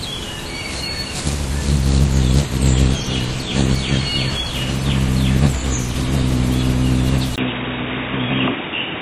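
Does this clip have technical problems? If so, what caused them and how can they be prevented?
Yes. At 7.36 s there is a brief gap of about 20 ms, and from there to the end the sound turns dull and boxy, with nothing above 3.8 kHz and a new, faint background noise, while the overall level stays about the same. This is likely an input switched to a poorer device, such as a headset's call profile. A codec or filter bandwidth drop would narrow the band without the dropout or the different noise floor. To prevent it, lock the recording input to one device and disable automatic switching for the session.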